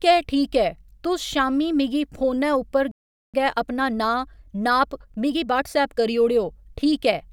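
At 2.91 s the speech cuts out and stays silent until 3.34 s, a gap of about 0.42 s, which is a playback stall. The likely cause is the player running short of buffered data or its output thread being held up, so nothing reached the output until it recovered.

From 3.34 s to 6.14 s the player works off the delay it built up, a time-compressed catch-up. It drops short slices of the signal and cross-fades across the joins, running about 1.15 times faster than normal while the pitch stays unchanged. The speech sounds hurried through that stretch, and then settles back to normal pace after 6.14 s.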